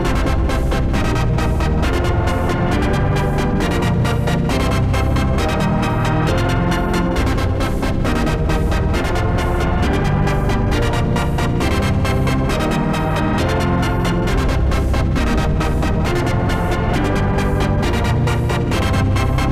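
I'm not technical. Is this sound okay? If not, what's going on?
Yes, this sound is okay. Nothing in it points to a technical problem.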